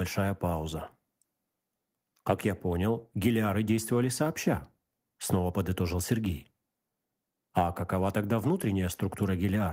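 No technical faults can be heard anywhere in the speech. Nothing in the recording stands out as needing a timestamp or a closer listen.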